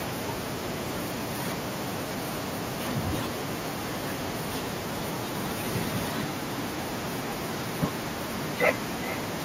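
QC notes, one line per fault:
5.95–9.44 s, feedback echo between two devices: from 5.95 s to the end, the speech comes back at a steady interval of about 0.4 s, peaking at about -13 dB below the direct sound. A second device in the room is playing the call aloud, and this microphone picks that playback up again. The local echo canceller only removes its own device's output, so it misses it. The fixed, distinct repeat spacing separates it from room reverberation, which smears continuously rather than repeating.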